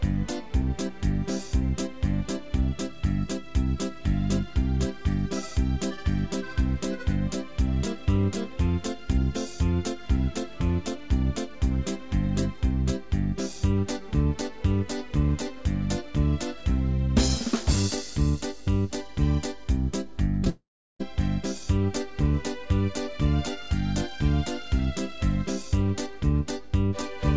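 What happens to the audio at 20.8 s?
Right around there the audio drops out, from about 20.50 to 21.01 s. The last bit of sound gets stretched into a fading buzzy hiss, then it goes quiet for roughly 0.36 s before the audio picks up again further along, with about half a second simply gone. That's the signature of a long network dropout, likely packets that never arrived, with the receiver papering over the gap. Like the rest of the call-path audio, everything there tops out around 8 kHz.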